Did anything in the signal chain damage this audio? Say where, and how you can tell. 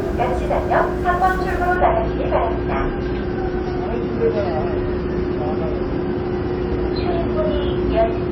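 Yes. The damage is at the network and codec stage: an adaptive stream at a lower bitrate. At 1.76 s the quality drops abruptly, with no gap, and stays down to the end. From there nothing is left above 5.8 kHz. The top end sounds dull, and coding artefacts become audible. That fits the player switching from a 128 kbit/s MP3 rendition to a 24 kbit/s one when the connection slowed. The encoder then discarded the treble to meet its smaller bit budget.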